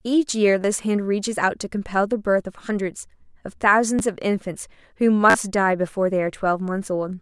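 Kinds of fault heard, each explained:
Repeated buffer: Fresh audio arrived late, so playback replayed its last block of about 10.7 ms, which fits a 256-sample buffer. Each repeat joins hard. Brief buzzy stutters sound at 0.62 to 0.64 s, 3.99 s and 5.30 to 5.34 s. The last is longest.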